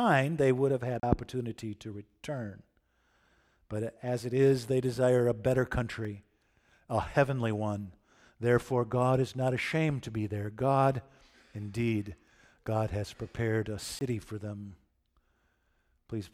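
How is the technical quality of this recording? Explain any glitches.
Three dropouts interrupt the speech, each a block of digital silence: 1.00 to 1.03 s (33 ms), 6.05 s (about 2.6 ms), and 13.99 to 14.01 s (20 ms). Samples were zeroed, likely because the output buffer went unfilled. The 6.05 s gap ticks, and the longer two sound like brief holes.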